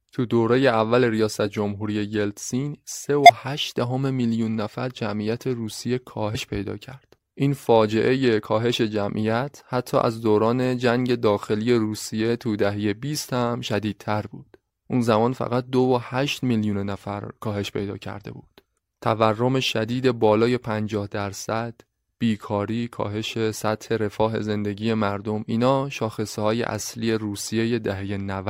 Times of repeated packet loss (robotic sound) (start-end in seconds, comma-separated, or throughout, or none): none